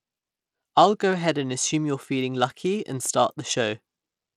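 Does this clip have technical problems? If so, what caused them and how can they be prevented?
Yes. Throughout the speech, the treble flickers in and out and a gritty, aliased noise rides on it, most likely Bluetooth SBC compression at a starved bit pool, which fits roughly 96 kbps. Unlike MP3-style artefacts, it's coarse, band-wise grit. Prevent it by recording over a wired connection or forcing a higher-bitrate Bluetooth codec.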